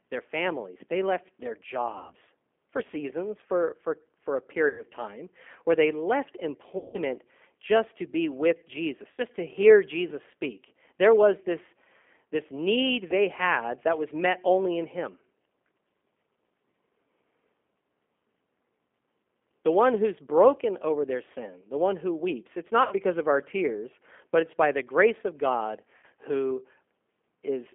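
Throughout, the speech carries G.729 codec damage: the line is held to roughly 200 Hz to 3.4 kHz and rebuilt from a vocal tract filter, pitch predictor and sparse pulses at 8 kbit/s, giving a plainly rough, synthetic edge rather than the hiss or smear of a noisy line.

VoIP packet loss concealed by the speech codec then strikes at 1.98 s, after "families they left their", at 4.68 s, at 6.78 s, after "time where they left", at 9.12 s, before "to hear", at 22.85 s and at 25.97 s, losing 60 to 160 ms each. The decoder stretches the last pitch and filter into a fading buzzy tone or coloured noise, and frames stay weak afterward, unlike the clean silence of a dropout.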